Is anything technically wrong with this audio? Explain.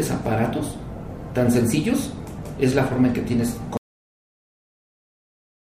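Yes. The audio has a cut-off end at 3.77 s. The sound stops mid-event there and drops straight to digital silence for the remaining 1.9 s or so, with no decay or natural tail. The final stretch of audio data was never written or played out. The last buffers were lost before reaching the output, so playback simply ends wherever the data ran out rather than where the sound itself finished.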